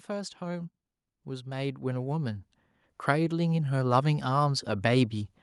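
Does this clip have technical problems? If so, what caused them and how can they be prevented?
Yes. Automatic gain rising runs from 0.06 to 2.49 s: the gain control judged the input too quiet and lifted it by about 8 dB over those two-plus seconds, so speech and background swell together. Setting a fixed input gain prevents it.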